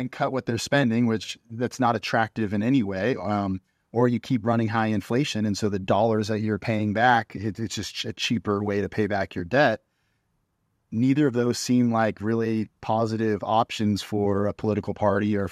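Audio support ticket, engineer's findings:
No audio faults found.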